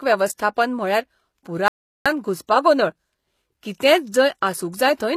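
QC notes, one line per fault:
Throughout: transcoding between lossy codecs. The speech shows two layers of coding damage at once, a low-rate HE-AAC-style smear over older MP3-type artefacts, likely from one lossy pass being re-encoded by another. The top end stops dead around 14.9 kHz.
1.68–2.06 s: audio dropout to silence. The speech cuts out mid-flow for about 376 ms of silence, with no room tone underneath, then comes straight back. That's likely the input going missing while the recorder kept writing silence, so that stretch is gone.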